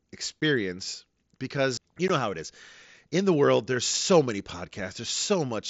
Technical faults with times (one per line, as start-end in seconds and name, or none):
0.41 unconcealed Bluetooth headset packet loss
2.08 unconcealed Bluetooth headset packet loss